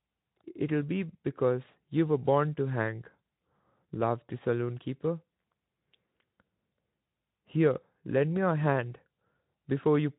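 Speech, with no technical faults to report.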